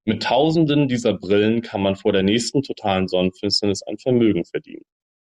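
No technical faults are audible.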